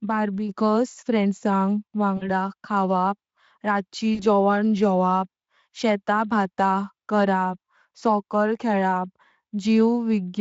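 At 2.17–2.29 s, after "बार्बेक्यूज फ्रेन्दसं", and 4.15–4.23 s, before "जोवणें जेवप शेताभात करप", VoIP packet loss concealed by the speech codec: the Speex decoder extrapolates about 40 ms of missing audio, consistent with two lost frames, into a stretched sound that fades and stays weak briefly afterwards.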